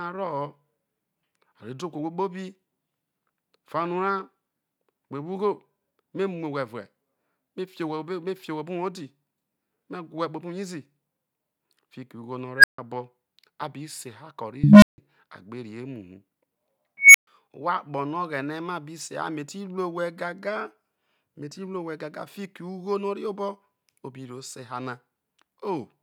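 Swelling squeals at 12.57 s (about 1.5 kHz), 14.64 s (low, about 200 Hz) and 16.98 s (about 2 kHz) clip, then drop into roughly 130–160 ms silences: an unstable filter whose runaway output overflowed before resetting.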